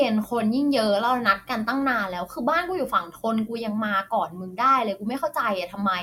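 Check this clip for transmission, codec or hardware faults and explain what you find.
Nothing audible in this speech clip points to a transmission, codec or hardware fault.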